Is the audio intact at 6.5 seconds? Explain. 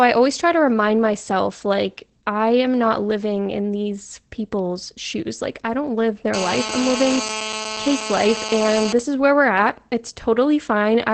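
No. From 6.34 to 8.93 s, right after "I don't live" and up to "this is where we're", there's a GSM phone buzz. A nearby 2G phone mid-call is bursting at about 217 Hz, and the audio circuitry rectifies those bursts into a harsh, raspy, harmonic-rich buzz sitting only about 7 dB under the speech.

Underneath that, the whole clip carries Opus voice compression in SILK mode. Nothing comes through above 8.4 kHz, and the speech sounds muffled and slightly hoarse and robotic, which fits a rate of about 12 kbps.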